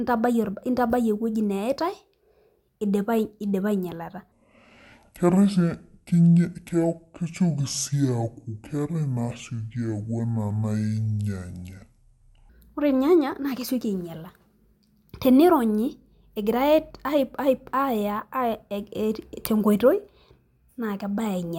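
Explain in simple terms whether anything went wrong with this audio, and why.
From 4.32 s to 12.49 s the speech turns deep and dragging, slowed to about 0.55 times normal speed and nearly an octave lower, until "ore ilnyanya naa kesioki". This section at the wrong speed was likely played against the wrong clock, lowering pitch and pace together.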